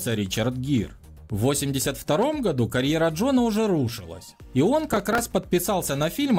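A burst of processor overload crackle runs from 4.90 to 5.23 s, a gritty tearing laid over the sound. The processor is falling behind on very short buffers, around 3 ms each, and roughly ten miss their deadlines over that stretch; each miss replays a stale fragment of old audio with hard edges. On a waveform this shows as small repeated, abruptly joined segments; on a spectrogram, a cluster of thin vertical broadband lines.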